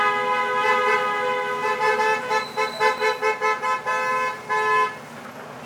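A doubled audio track runs from the start until 2.98 s, likely from a second, slower capture path mixing the same audio back in. A full-band copy, about as loud as the original, trails it by roughly a second with no decay or room colour, then stops abruptly.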